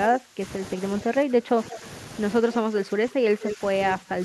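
From 0.07 to 0.42 s the speech dips sharply, by about 20 dB at its deepest. This is speech suppressed in double talk. The likely cause is an echo canceller that could not tell this talker from the loudspeaker echo while both sides spoke, so it turned everything down. The speech dips again by about 10 dB from 1.03 to 1.83 s and from 2.43 to 3.61 s. That second stretch is affected for about a second. A final dip of about 15 dB runs from 3.98 to 4.21 s.

At 1.7 to 1.75 s a faint delayed copy of the speech appears, about 15 dB below it. This is an echo leak. It lags the speech by 170 ms. The far end's echo canceller likely failed to remove all the loudspeaker sound its microphone picked up and sent it back. A stronger scrap follows from 3.41 to 3.54 s, only about 5 dB below the speech, with a 174 ms lag.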